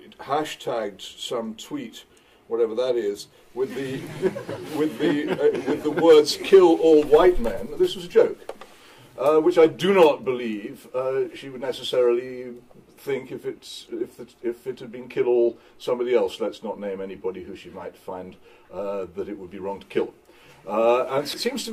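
Right near the end, at 21.33 to 21.38 s, there's a case of compressed frames skipped. The audio lurches forward by roughly a fifth of a second, which fits about ten 20 ms frames being dropped or rejected by the decoder.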